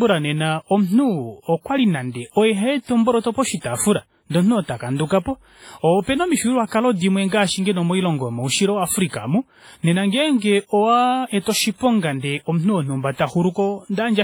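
From start to end, the speech sounds washy and ringing. A hiss breathes with it. This is likely WMA compression, with damage that fits a low bitrate near 24 kbps.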